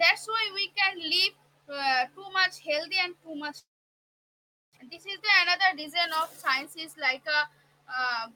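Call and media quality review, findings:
Long network dropout, 3.59–4.79 s: sound decays into a brief fading buzz, then near-silence for about 1.07 s, and resumes with about 1.0 s of content gone. Likely packet loss with a delay jump of around 150 ms. Waveform flatlines; spectrogram goes blank.

Jitter buffer speed-up, 5.65–7.63 s: speech runs about 6% fast at unchanged pitch and sounds slightly hurried. The receiver drains excess buffer by cutting pitch-period pieces, about a tenth of a second in total. Spectrogram shows compressed timing and unshifted harmonics.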